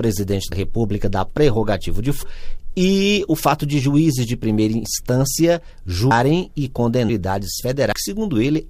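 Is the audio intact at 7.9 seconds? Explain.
No. At 7.91 s the audio has compressed frames skipped: whole frames of the coded stream never reached the output, either missing from the file or rejected by the decoder as damaged. The sound leaps forward by roughly a fifth of a second, which points to about ten frames of 21.3 ms each. The seam is a jump rather than a pause, and no silence fills the gap.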